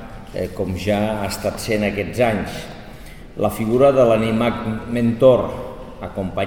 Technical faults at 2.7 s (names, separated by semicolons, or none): chunks out of order